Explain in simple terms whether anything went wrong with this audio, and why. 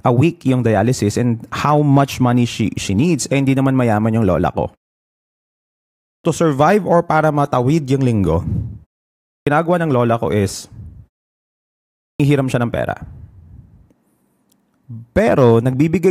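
Three times the speech jumps in abruptly, missing its opening sounds: at 6.08 s before "survive or para matawid", at 9.32 s, and at 12.05 s before "siya ng pera". This is a clipped start after a pause. During each silence, the playback device dozes off and takes about 0.15 seconds to wake, cutting off the beginning of what follows.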